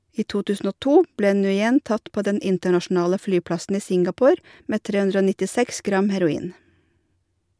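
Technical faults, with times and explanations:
Nothing technical stands out here; the speech comes across steady and intact the whole way.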